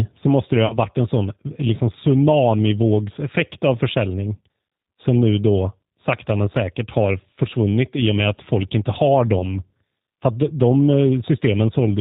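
Throughout the speech, the G.729 codec is plainly audible. Its 8 kbit/s-class sound rebuilds each frame from a vocal tract filter, a pitch predictor and a few pulses, and it discards everything above 4 kHz, leaving the speech dull, slightly rough and synthetic.

At 0.66 to 0.78 s, VoIP packet loss concealed by the speech codec appears. About 40 ms of signal goes missing, which fits two lost packets, and the decoder extrapolates from its last pitch and filter with falling gain, so the speech stretches into a fading buzzy tone or coloured noise and stays weakened briefly after. The same happens at 9.39 to 9.53 s with about 20 ms missing, giving a shorter smeared fade and a brief recovery.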